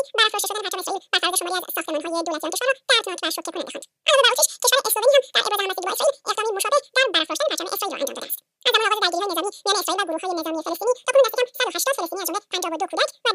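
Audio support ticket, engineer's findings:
Wrong sample rate, whole clip, start to end. Sound runs at double speed and a full octave high, 12 semitones up, which fits 24 kHz material played out at 48 kHz with no resampling. Probable component: output stage clock or missing sample rate converter. Unlike a pitch shifter, duration changes with pitch. Unlike time-stretch, pitch and tempo move together at the same fixed 2.0 ratio.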